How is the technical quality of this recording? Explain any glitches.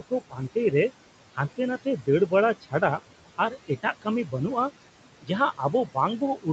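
The recording has two related problems, both from noise suppression: steady processing artefacts throughout, and three places where parts of the speech were suppressed along with the noise. The room noise sits about 15 dB below the speech, and the call path limits the audio to 8 kHz.

Noise suppressor artifacts run through the whole clip. The suppressor estimates the steady background and turns down each frequency band it judges to be noise, frame by frame, by as much as about 17 dB. As a result, the background drops away in the gaps and comes back up under the speech. On a spectrogram, the noise floor looks patchy, with isolated time-frequency specks left in the pauses instead of an even haze.

Speech cut by the noise suppressor happens three times: from 0.0 to 0.39 s, from 3.38 to 4.07 s, and from 6.2 to 6.47 s. In each stretch the suppressor mistook quiet speech energy, such as soft consonants or trailing syllables, for noise and pulled it down by about 15 to 17 dB. 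Only short portions within each span are affected, roughly a tenth of a second or a little more. Those sounds come across as swallowed or faint. On a waveform the envelope dips abruptly at those points, and on a spectrogram the weak speech energy is missing there.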